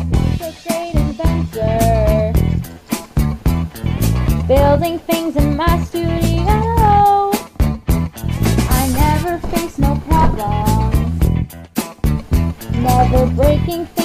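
No technical faults are audible anywhere here.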